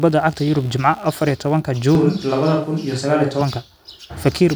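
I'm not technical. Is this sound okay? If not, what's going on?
No. All the way through, a faint low buzz with a scratchy, chirping edge sits under the speech. This is computer activity noise: the computer's changing workload disturbs the electrical ground shared with the audio equipment, so the buzz follows the machine, not the talking.

Right after "iyo tobanka", from 1.95 to 3.41 seconds, the speech suddenly turns hollow and roomy, with less bass and more background noise, then snaps back. This is a switch to a distant microphone, likely because the close microphone briefly dropped out and a farther one filled in.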